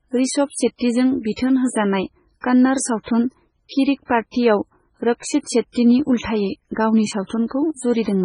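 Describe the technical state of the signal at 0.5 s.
At 0.5 s the speech carries the same damage it has from start to finish, and it sounds like heavy MP3 compression. There's nothing above 10.6 kHz, and the remaining sound has a watery, swirly quality as weak frequency lines drop in and out between frames. That's the likely result of an encoder starved of bits, cutting the treble outright and zeroing detail it judged inaudible. The sound points to a very low bitrate, around 16 kbps.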